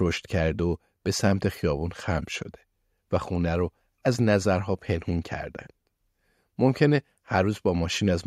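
No technical faults are audible.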